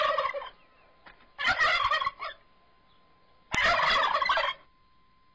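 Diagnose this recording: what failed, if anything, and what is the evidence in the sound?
A single sharp, loud click snaps out at 3.55 s, over in about a millisecond and unrelated to whatever the surrounding audio is doing. This is a file header played as audio, a storage and file-assembly fault. Two WAV pieces were joined without stripping the second piece's header, so its few dozen bytes of metadata were read as sample values. Those arbitrary numbers form a brief burst of large, random amplitudes, heard as the click at the join.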